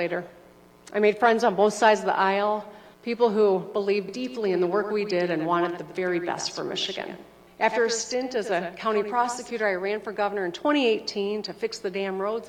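The audio has a doubled audio track from 4.09 s to 9.51 s. A second full-band copy of the sound trails the original by about a tenth of a second. It sits roughly 10 dB below the original. It has no decay or room colour, so it reads as a hard repeat rather than reverb. It cuts in and out abruptly at both ends. The likely cause is a slower second capture path or an edit that left two copies out of step.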